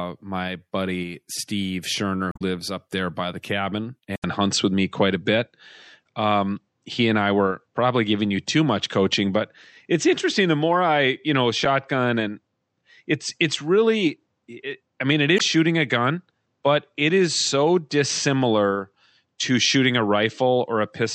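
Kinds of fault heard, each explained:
MP3 compression: The whole recording carries plainly audible coding damage, a watery, swirly texture on the speech with smeared consonant onsets and chirpy sibilants, as happens when an encoder, likely MP3 at around 64 kbps, runs short of bits and drops weak frequency content frame to frame.
Damaged data in a compressed stream: Corrupted bytes make the decoder misread frames, lose sync and hunt for the next header, producing short squawks or blips. These occur at 2.31 to 2.42 s, at 11.65 s, and at 15.36 to 15.41 s.
Input switched to a poorer device: At 4.16 s the sound drops out for 80 ms, then returns duller and narrower, with nothing above 8.1 kHz, a level shift of roughly 5 dB and a new noise floor about 55 dB down, likely from a change to a lesser microphone or headset profile.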